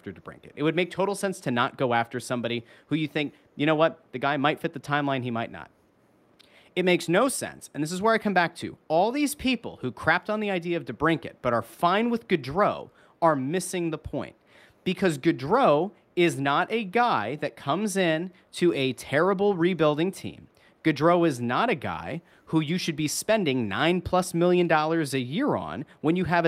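Nothing stood out as a technical fault anywhere in this speech recording.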